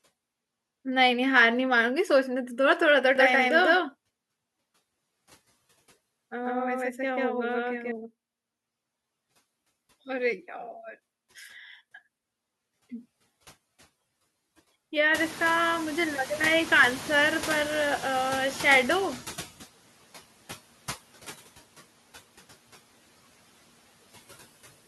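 The noise suppressor artifacts run the whole way through: the suppressor pulls steady noise down by about 16 dB, so the leftover noise sinks between words and swells under them.

From 3.16 to 7.92 s there's a doubled audio track, a full-band copy of the speech roughly as loud as the original, trailing by around 150 ms, likely a second capture path.

When the room noise jumps by about 24 dB around 15 s, the noise suppressor is catching up from 15.14 to 19.51 s. The noise comes through under-reduced, then settles to about 13 dB of cut over 4.37 s.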